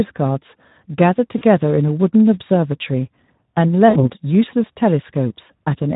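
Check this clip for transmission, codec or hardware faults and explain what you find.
Two faults are present: Speex codec damage across the whole clip, and two bursts of VoIP packet loss concealed by the speech codec.

Speex codec, throughout: this CELP coder is running at around 11 kbps, which fits a low-to-middle quality setting. That leaves it with few bits for the excitation signal, so the speech comes out plainly hoarse and grainy.

VoIP packet loss concealed by the speech codec, at 1.38 to 1.44 s and 3.89 to 4.10 s: packets went missing, roughly two frames' worth and then three. The decoder carried on from its last pitch and filter, lowering the gain as it went. The speech smears into a fading buzzy tone or coloured noise, and it stays weak briefly after packets resume.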